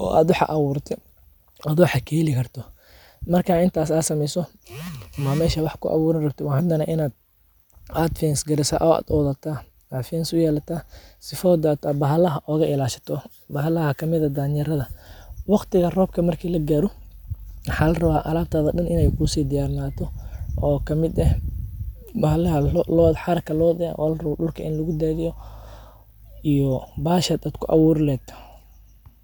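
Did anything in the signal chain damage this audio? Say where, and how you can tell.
No, nothing along the way seems to have hurt this speech recording, and there's nothing I'd point to at any stage.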